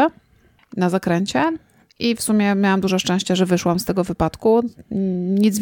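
No technical faults turn up anywhere in this speech recording, so there's nothing to flag here.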